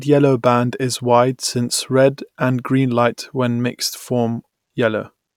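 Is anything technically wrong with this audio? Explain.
No, nothing technically wrong can be heard here.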